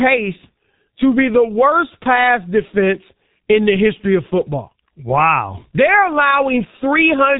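From start to finish the speech carries the heavy coloration of the G.723.1 codec. The band stops at 4 kHz, so sibilants and upper harmonics are missing and the sound is muffled. The coder works in long frames and refreshes its model of the voice slowly, which smears fast transitions: consonants blur together and the voicing takes on a hoarse, buzzy roughness. The depth of the damage fits a 6.3 kbit/s stream.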